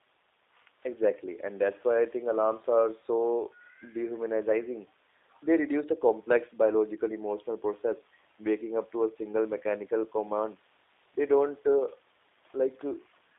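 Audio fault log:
Throughout: G.729 codec damage. The speech is plainly rough and synthetic, and the band is squeezed to roughly 300 Hz to 3.7 kHz. The encoder models each 10 ms frame with a vocal tract filter, a pitch predictor and a handful of pulses, which fits an 8 kbit/s G.729A stream. On a spectrogram nothing shows above 3.7 kHz or below 300 Hz, and harmonics look smeared and blocky from frame to frame.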